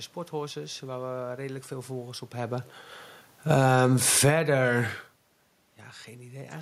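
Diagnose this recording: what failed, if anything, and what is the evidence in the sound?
The speech and its room background sink together by about 19 dB from 3.35 to 4.45 s: automatic gain falling, as call processing judged the input too loud or its background too strong.

From 3.66 to 5.13 s, voice and background swell back by about 9 dB together: automatic gain rising, the same call-processing stage raising gain for quiet input.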